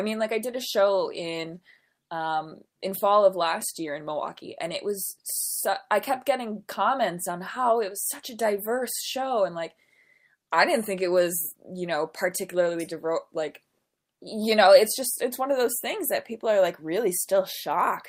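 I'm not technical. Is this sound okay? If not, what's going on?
Yes, no faults to report.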